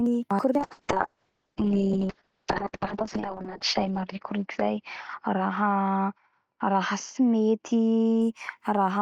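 A call bitrate drop runs from 0.59 to 8.27 s: the encoder is starved of bits, consistent with a fall from 48 to 6 kbps, and bandwidth narrows from 20 kHz to 8 kHz. The speech turns muffled and rough, worst for about 2.6 s.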